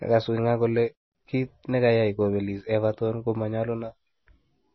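MP3 compression throughout: the speech stops dead at 5.9 kHz and swirls wetly, likely from an encoder starved of bits, which fits a bitrate near 24 kbps.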